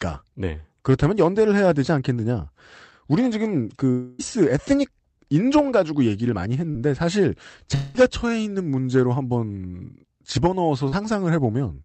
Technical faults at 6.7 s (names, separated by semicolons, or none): short concealed packet loss